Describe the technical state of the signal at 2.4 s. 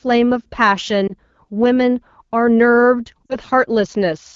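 At 2.4 s the speech is intact, with no fault present, carried cleanly through the AMR wideband (HD Voice) codec.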